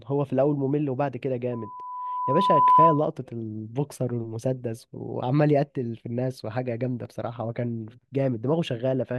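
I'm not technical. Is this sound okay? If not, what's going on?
No. From 1.52 to 3.07 s there's a loudspeaker feedback squeal: the microphone picks up its own speaker, and a 1 kHz tone feeds on itself, swelling over about a second until it's ringing well above the speech, then it stops.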